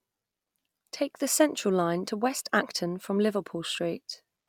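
No technical faults are audible anywhere in the speech.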